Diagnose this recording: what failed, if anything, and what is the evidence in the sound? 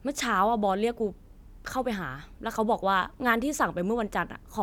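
Nothing failed; no faults heard.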